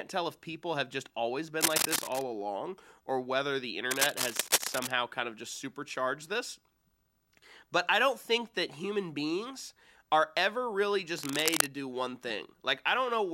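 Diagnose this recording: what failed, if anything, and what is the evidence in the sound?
Cable scratch noise at the analogue wiring stage, likely from a worn connector or cable being moved. Ragged bursts about as loud as the speech appear at 1.60–2.22 s after "people have just always", then at 3.91–4.91 s and 11.18–11.74 s. Rapidly fluctuating contact resistance shows as dense, irregular broadband streaks on a spectrogram and as spiky clusters in the waveform.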